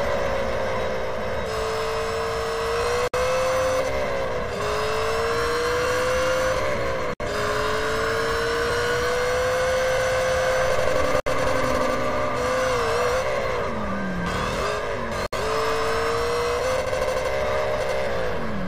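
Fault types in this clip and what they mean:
Gap at a join of encoded pieces: the audio was encoded in separate chunks and joined back together without trimming, so each chunk's encoder start-up delay and last-frame padding stayed in. You hear a short hole about every 4 s, at 3.08, 7.14, 11.2 and 15.26 s. The first is about 59 ms and the rest about 64 ms, with edges smeared by the codec, and then the sound carries on right where it stopped.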